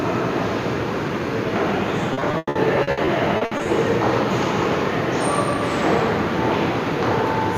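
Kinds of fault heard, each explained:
Repeated packet loss (robotic sound): from 2.13 to 3.67 s, about a dozen dropouts up to 100 ms are patched by extending the preceding sound, leaving choppy, broken audio.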